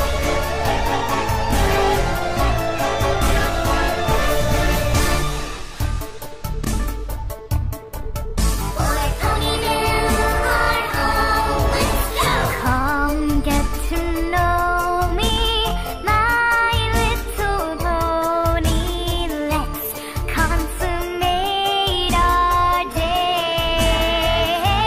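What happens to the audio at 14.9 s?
Nothing goes wrong at 14.9 s: the audio plays through that moment intact, with no dropout, click, glitch or other fault.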